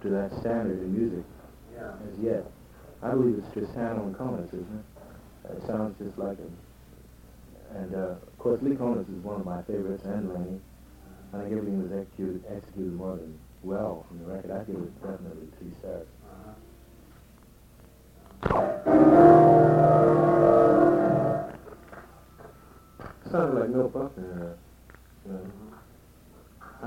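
One channel runs late by about 46 ms for the whole clip, which fits a 2048-sample buffer, and the two channels are summed to mono. This channel delay (doubling) puts a second, equally loud copy just behind the first, heard as a slap echo.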